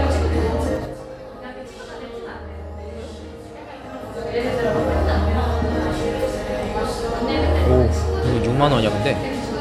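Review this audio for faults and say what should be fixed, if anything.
Zipper noise runs from 0.68 to 1.02 s. The level drops by roughly 15 dB over that span, but not smoothly. It falls in 3 dB steps, about ten per second. Each jump is an instant gain change with no ramp between values. That jump puts a small click into the sound. The clicks come in a rapid series and give a ticking, zipping texture on top of the sound while the level falls.

To prevent it, interpolate the gain per sample, or ramp it smoothly across each block, so the level glides rather than jumps.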